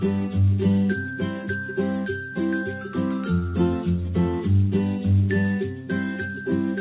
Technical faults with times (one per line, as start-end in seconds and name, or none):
none